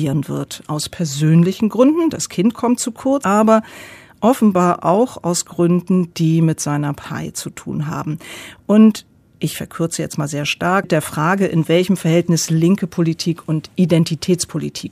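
At 3.24 s the speech skips forward: roughly a fifth of a second of audio is gone, and the material on either side is butted together with no gap of silence, so the flow jumps abruptly. This is likely audio missing between chunks, where the recording or processing chain handles the signal in 4.0 s blocks and drops a short stretch while closing one block and starting the next.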